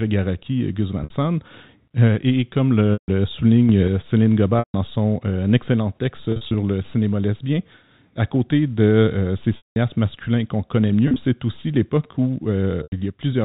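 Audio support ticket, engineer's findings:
Packet loss with pitch repetition: held, buzzy pitch fragments at 1.04, 2.93, 4.59, 6.32 (after "son excellent", scattered over 0.22 s), 9.57, 11.08 and 12.83 s, covering 50 to 190 ms of lost audio. The receiver's concealment loops the last pitch period and fades it out over about 50 ms. The longer gaps go silent before a cross-fade back in.

Sudden gain jump: at 3.69 to 3.88 s, speech and background noise step up together by about 4 dB with no ramp. The likely cause is a digital gain or bit-shift change applied between samples. The 4 kHz band limit of the G.711 path is audible throughout.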